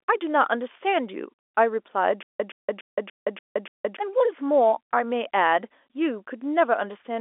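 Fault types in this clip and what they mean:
Stutter with silent gaps: from 2.23 to 3.97 s one 121 ms fragment of speech plays six times, each followed by about 169 ms of dead digital silence, an even 290 ms cycle. The cause is likely a stalled stream replaying its last buffer at each retry, so the speech due in that stretch is lost. Plain dropouts would not repeat identical material, and a seamless loop would lack the true silence between bursts.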